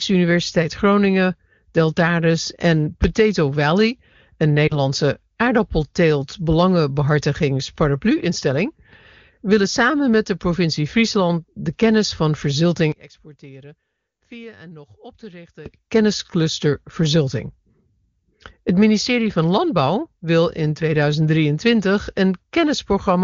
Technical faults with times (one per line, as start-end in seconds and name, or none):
4.67-4.75 lost AMR speech frames
12.92-15.66 one channel inverted